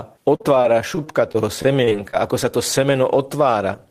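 From 0.35 to 2.15 s, just before "ako sa to", repeated packet loss gives a robotic sound. About a dozen short holes, the longest 44 ms, are each patched by extending the preceding audio, leaving the speech choppy.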